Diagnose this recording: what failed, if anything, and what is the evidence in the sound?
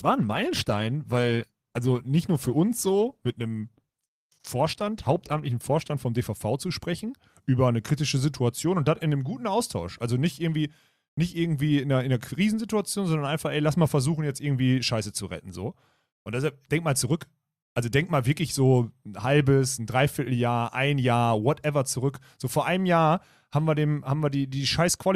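The fault is an adaptive stream starting at a low bitrate, at the playback and network stage. From 0.0 to 6.0 s the speech is dull and smeared with codec artefacts, which fits about 16 kbit/s Opus, then brightens abruptly, as if stepping to 64 kbit/s. There is no gap or stall, unlike a rebuffering switch.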